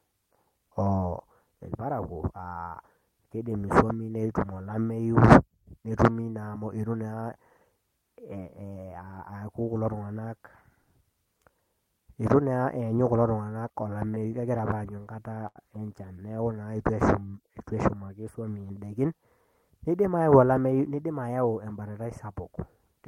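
From 13.59 to 15.58 s the speech shows repeated stalls (stutter): packets arrived late, the jitter buffer kept running dry, and twelve short gaps were bridged by continuing the last sound, the longest about 77 ms. About 10% of that span is concealment, so nothing is lost, but delivery drags and stumbles.

Between 18.63 and 19.2 s a jitter buffer speed-up occurs. The buffer had overfilled, so the receiver repeatedly cut out pitch-period-sized pieces, roughly a tenth of a second in total. Speech runs at about 114% speed with unchanged pitch and sounds briefly hurried.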